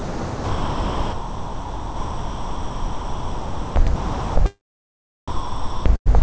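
From 0.0 to 3.76 s, again from 3.96 to 4.36 s and from 5.28 to 5.86 s, the sound gives way to steady, featureless noise. This is likely sound dropped by the voice detector, with comfort noise filling the gaps. On a spectrogram these stretches appear as flat, uniform hiss with no events.

From 5.96 to 6.08 s, a burst of packet loss removes about 100 ms. The last sound is held and fades, leaving a smeared, decaying tail before the waveform resumes further on.

Throughout the clip, the spectrogram stops at 8 kHz, which fits the G.722 wideband call path.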